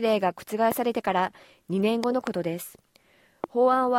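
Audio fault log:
0.72–0.74 s, 2.04–2.29 s and 3.44–3.46 s, loud pop: three sharp pop events sit on top of the sound, which carries on underneath. The first peaks about 10 dB above the signal. The second is a double pop, peaking about 15 dB above. The third is single and about 15 dB above. Each is likely a brief voltage step or pulse, from a plug, switch, static discharge or driver glitch, shaped in the following circuitry.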